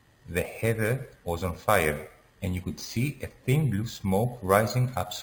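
Throughout the speech, imaging from sample-and-hold upsampling adds a bright metallic fizz, about 18 dB below the voice, that rises and falls with it. Each sample was held without smoothing, which fits roughly 11 kHz raised to 48 kHz. A spectrogram shows mirrored harmonics between 5.5 kHz and 11 kHz moving opposite to the pitch, and the waveform shows fine stair-steps.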